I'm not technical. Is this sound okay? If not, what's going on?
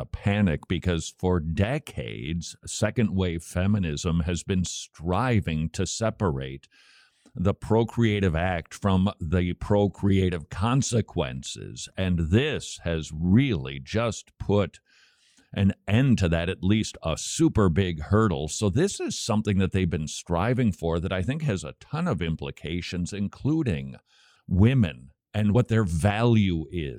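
Yes, it sounds fine.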